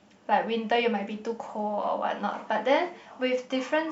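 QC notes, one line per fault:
No technical faults are audible anywhere in the speech recording, and the signal holds steady throughout.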